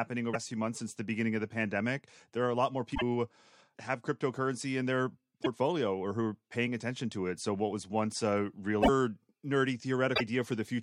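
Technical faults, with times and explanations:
0.30–0.36 s, 2.91–3.02 s, 5.42–5.47 s, 8.79–8.89 s and 10.12–10.21 s: damaged data in a compressed stream. Each is a brief chirp or blip breaking into the speech, lasting about 40 to 110 ms. Corrupted bytes make the decoder misread frames and lose sync. It then hunts for the next valid frame header.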